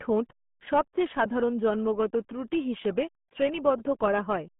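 From start to finish, the speech carries RealAudio 14.4 codec damage. Nothing passes above 3.6 kHz, and the band sits near 150 Hz to 3.4 kHz. Heavy low-bitrate coding makes it muffled and gargly, which fits an 8 kbit/s dial-up codec.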